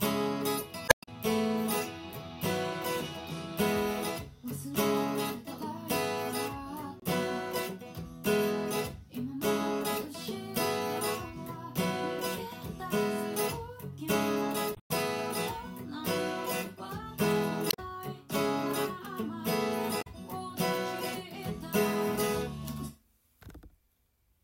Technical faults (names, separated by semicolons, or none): damaged data in a compressed stream